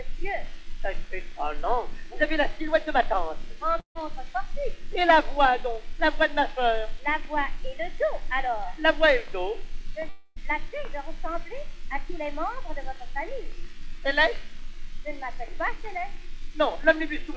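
The audio cuts out twice, at 3.80 to 3.97 s and 10.09 to 10.38 s, most likely from a long network dropout. In each gap the last sound is stretched into a fading buzz, and the waveform resumes with a chunk missing. Spectrograms show smeared horizontal bands, ending in a short silent gap only in the first, below a hard 8 kHz ceiling that fits a wideband call codec.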